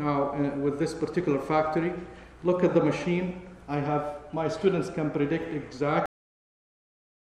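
The final buffers were never written out or played, leaving a cut-off end: at 6.06 s the audio stops abruptly in the middle of a sound and falls straight to digital silence with no natural decay, staying silent for the remaining 1.2 s.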